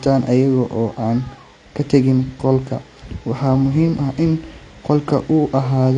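AAC compression runs throughout the speech, with nothing above about 9.9 kHz. The sound is dull and smeared, with a warbling, fizzy texture on sibilants and held sounds. The likely cause is low-bitrate AAC-LC coding, which fits roughly 32 kbps.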